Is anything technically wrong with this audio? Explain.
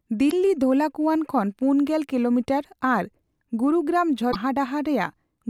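Yes. The speech has two bursts of damaged data in a compressed stream. The first runs from 0.28 to 0.33 s. The second runs from 4.29 to 4.36 s. In each, part of the encoded data is corrupt. The decoder cannot read those frames properly. It loses sync and hunts for the next valid frame header. The result is a chirp, squawk, click or short hole lasting about 50 to 80 ms.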